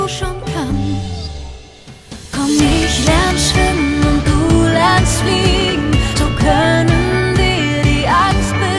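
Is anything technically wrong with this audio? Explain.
No, nothing technically wrong can be heard in this audio.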